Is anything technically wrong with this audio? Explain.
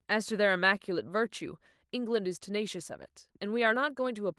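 No, nothing is technically wrong with this audio.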